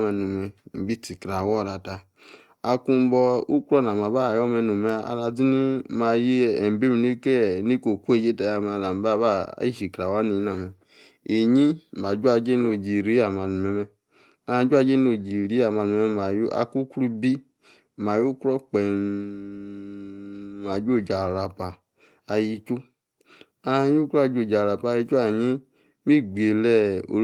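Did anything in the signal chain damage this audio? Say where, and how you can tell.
No, nothing stood out on listening to this speech recording that would point to damage at any stage of the signal chain.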